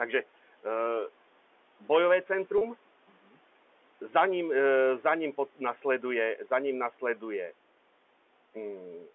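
A speech recording with two faults. From 2.58 to 2.61 s there is packet loss with pitch repetition. About 30 ms of audio is missing, consistent with a single lost packet, and the receiver bridges the gap by repeating the last pitch period, so the sound briefly holds on a slightly buzzy, sustained tone. Between 3.08 and 3.36 s the noise suppressor cuts into the speech. It misjudges part of the signal as background and pulls it down by up to about 8 dB over roughly 150 ms in total, leaving those sounds faint and swallowed.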